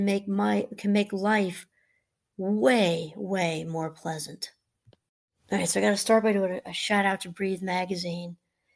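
No technical faults can be heard anywhere in the recording.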